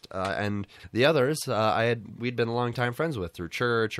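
Frames out of order occur twice in this speech. From 0.75 to 0.85 s, after "uh and", two adjacent blocks of about 42.7 ms play swapped. From 2.05 to 2.19 s, before "we'd been longtime", two blocks of 64.0 ms do the same. These lengths fit runs of two and three frames. Each stretch sounds like a brief garbled flutter, and no time is lost.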